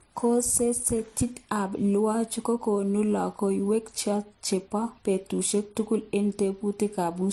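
Throughout the speech, nothing sits above 12.1 kHz, and two kinds of coding damage are heard together: the artefacts of both codecs at once. This is transcoding between lossy codecs, likely low-bitrate MP3 re-encoded as HE-AAC.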